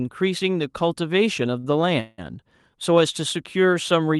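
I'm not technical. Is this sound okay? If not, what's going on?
No. At 1.59 to 1.66 s there is a short stall from a late packet: one piece of the call arrived late, so the receiver held the last sound for about 40 ms, then carried on. Nothing is lost, but that moment sounds briefly drawn out.

At 2.00 to 2.21 s there is a call audio freeze: the sound hangs as a buzzy stretch for about 0.18 s without dropping to silence, then resumes where it stopped. The likely cause is packets held up on the network, delaying the audio rather than cutting any of it.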